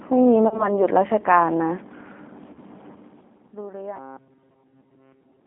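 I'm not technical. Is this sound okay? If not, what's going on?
No. The speech has gone through a phone-call system and suffered in two ways.

First, the whole clip carries the sound of the G.729 codec, a squeeze used for internet phone calls. It rebuilds the voice from a rough model instead of sending it as recorded. Everything above about 3.6 kHz is gone, so the speech sounds thin and muffled. The damage is plainly audible: the voice is rough and slightly artificial.

Second, there are two short glitches from VoIP packet loss concealed by the speech codec. A small piece of the call went missing in transit, about the length of one lost packet. The decoder guessed the gap by stretching the last bit of sound. You hear this from 0.48 to 0.73 s, and again from 2.53 to 2.59 s. The voice turns buzzy or smeared, then takes a moment to recover.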